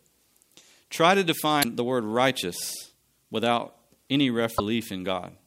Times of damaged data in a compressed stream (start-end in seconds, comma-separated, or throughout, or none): 1.60-1.65, 4.55-4.60